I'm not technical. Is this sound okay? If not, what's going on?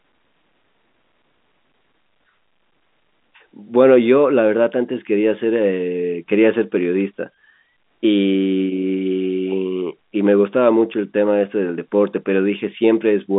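Yes, nothing is wrong with this recording.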